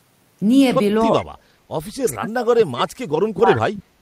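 From 1.01 to 1.33 s the speech dips sharply, by about 25 dB at its deepest, over roughly a third of a second. This is speech suppressed in double talk. The likely cause is an echo canceller that could not tell the near talker from loudspeaker echo while both sides spoke, so it attenuated everything. Within that dip, from 1.19 to 1.26 s, an echo leak appears: a faint copy of the speech trailing by 395 ms, about 20 dB below it. It likely comes from a speakerphone whose canceller let part of its microphone pickup return down the line. A second, briefer leak at 2.12 to 2.16 s has the same 395 ms delay and sits about 25 dB down. It is heard as a short scrap. From 2.14 s to the end of the clip, suppression returns and goes deeper, with drops of about 35 dB. The speech is likely pushed down under the same double-talk clamping.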